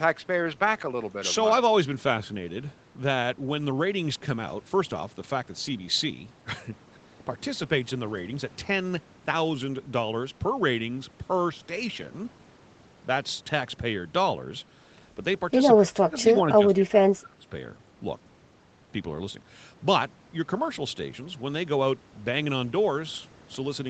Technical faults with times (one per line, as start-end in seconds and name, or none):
15.79-17.47 speech suppressed in double talk